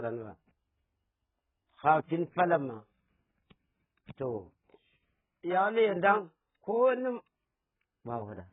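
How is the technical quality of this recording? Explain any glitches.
Technical quality is poor. Throughout the speech, nothing sounds above 3.8 kHz, and the audio is dull and smeared with a warbling, fizzy texture, likely from AAC compression at a very low bitrate.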